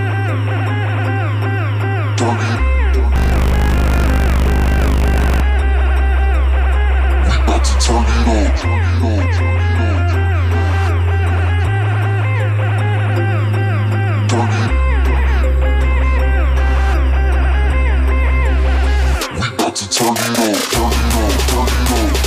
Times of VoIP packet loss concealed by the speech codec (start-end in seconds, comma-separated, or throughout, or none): none